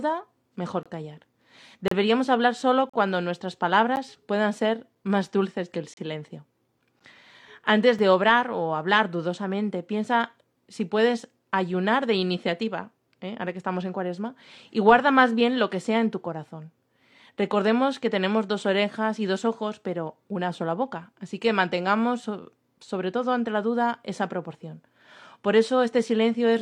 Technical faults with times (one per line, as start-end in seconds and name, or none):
0.83-0.86 gap between stream segments
1.88-1.91 gap between stream segments
2.90-2.94 gap between stream segments
3.96 gap between stream segments
4.95 gap between stream segments
5.94-5.97 gap between stream segments
7.00 gap between stream segments
7.99 gap between stream segments